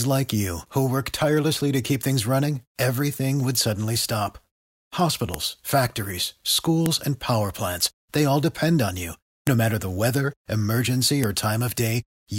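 Speech with a file header played as audio: sharp clicks at 5.34, 6.86, 9.47 and 11.24 s, each a sharp waveform spike and a thin broadband spectrogram line.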